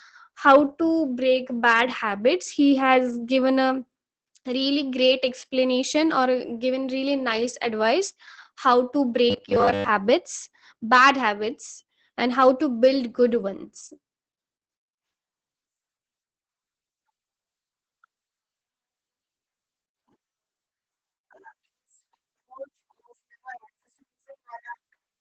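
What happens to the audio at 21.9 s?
At 21.9 s the speech carries Opus voice compression, present through the whole clip. Coarse linear-prediction coding, consistent with SILK at about 12 kbps, makes it muffled, hoarse and slightly robotic. A spectrogram shows nothing above 8.7 kHz and smeared, grainy harmonics.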